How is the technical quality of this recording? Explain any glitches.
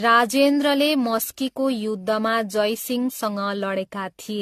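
Poor: the speech is cut off above 14 kHz and worn in a way that fits 64 kbit/s AAC. Throughout, generation loss: likely about seven AAC re-encodes, each requantising on a shifted frame grid, leaving speech swirly and hollow with blurred attacks, worse than one encode.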